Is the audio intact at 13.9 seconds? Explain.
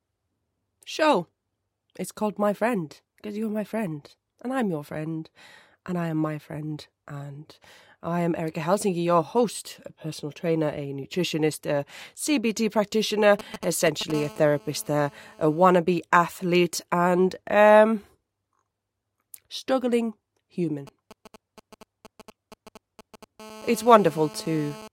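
No. GSM signalling bursts run from 13.39 to 14.12 s: a nearby 2G phone exchanging signalling emits short radio bursts that the audio circuit rectifies, producing a galloping dit-dit pattern of short 217 Hz buzzes roughly 10 dB below the speech.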